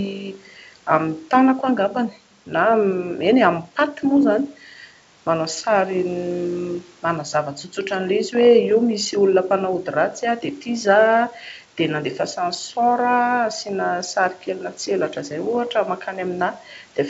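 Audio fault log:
No faults detected.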